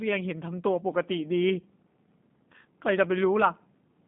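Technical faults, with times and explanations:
Throughout: G.729 codec. Speech is rebuilt from a vocal tract filter and sparse pulses, so it sounds plainly rough and synthetic. Nothing passes above 3.8 kHz.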